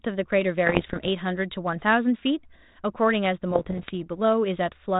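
From 0.66 to 1.09 s and again from 3.51 to 3.91 s the speech breaks into pops and rough, gritty bursts with brief jumps in level. These are bit errors on an ADPCM link, with roughly one percent of bits flipped in the first stretch and somewhat fewer in the second. Each flipped bit throws off the decoder's step size and predictor, so the damage rings on for a few milliseconds instead of staying a single click. A waveform shows sudden spikes and short lumps of excess amplitude. A spectrogram shows broadband vertical streaks within a band capped near 4 kHz, which fits the 32 kbit/s G.726 ADPCM path.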